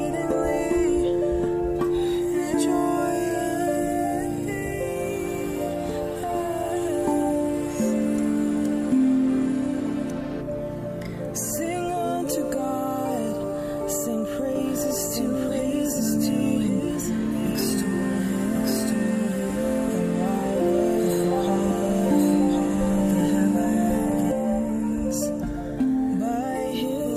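From 14.55 s to 24.31 s, a second copy of the sound runs about one second behind the first, at roughly the same loudness, so everything is heard twice in an overlapping, confused echo. The trailing copy is dry and full-band, with no fade or room tone, and it cuts in and out abruptly at both ends. This is a doubled audio track, likely from the same audio being captured again through a slower path.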